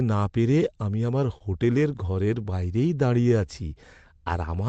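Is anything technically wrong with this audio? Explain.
Yes. From 1.07 to 2.10 s, just after "না পেরে আমি", the speech shows scattered short gaps: roughly five lost or late packets, none longer than about 30 ms, each patched by extending the preceding sound. The result is brief ticks and small smears across that stretch.

From 2.98 to 3.95 s there is a jitter buffer slow-down. The receiver repeated short pitch periods to rebuild its reserve, adding 81 ms and running at 92% speed. Speech sounds drawn out at unchanged pitch.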